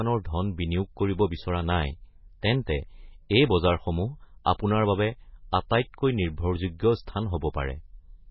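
Heavy MP3 compression is the likely cause of what runs through this speech recording: an encoder starved of bits, which fits a bitrate around 16 kbps, cuts the treble at a fixed frequency and zeroes weak frequency lines. Nothing remains above 5.6 kHz, so the sound is dull and watery with swirling artefacts. Pre-echo comes from the same codec spreading quantisation noise across a whole block ahead of sharp attacks. A hiss leads an attack from 4.44 to 4.46 s, spread over 20 ms, and another at 5.69 s, spread over 12 ms, leaving both onsets softened.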